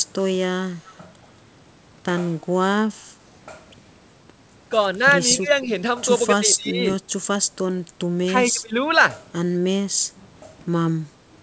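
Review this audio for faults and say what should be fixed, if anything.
Echo leak, from 0.7 to 1.05 s: the far end was likely on a loudspeaker, and its echo canceller let part of what its microphone picked up pass back down the line. The result is a faint copy of the speech trailing about 232 ms behind the original, well below the direct sound, heard as a brief ghostly repeat. Better acoustic echo cancellation at the far end, or a headset there, would stop the return path.

Speech suppressed in double talk occurs at 5.41 to 5.47 s, 6.39 to 6.85 s and 8.25 to 8.79 s. With both sides talking at once, the echo canceller likely could not tell this talker apart from loudspeaker echo and turned the signal down. The first dip is brief and shallow. The later two are deeper, reaching about 15 dB and about 20 dB, so the speech audibly sinks for a few hundred milliseconds each time. A canceller tuned to hold full gain during double talk would prevent these drops.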